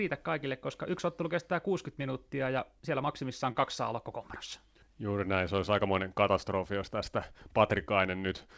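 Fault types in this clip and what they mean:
Short stall from a late packet, 3.52 to 3.58 s: a speech packet arrived late, the jitter buffer ran dry, and the receiver held the last sound for 27 ms until it came, then resumed where it left off. Nothing is lost, but that sound lingers with a slight buzz or dip.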